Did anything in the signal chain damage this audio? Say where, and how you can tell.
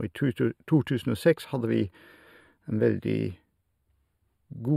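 Yes. Channel delay (comb filtering) runs through the whole speech clip: one channel trails the other by a few samples, well under a millisecond, before a mono sum. Shared content cancels at evenly spaced frequencies, starting around 7 kHz, sounding hollow or phasey with fixed notches.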